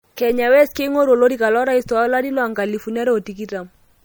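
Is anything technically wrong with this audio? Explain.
Yes. Throughout the speech, this sounds like low-bitrate audio saved at a high bitrate: smeared MP3 artefacts persist despite content reaching 20.1 kHz, likely from roughly 64 kbit/s audio re-encoded near 192 kbit/s.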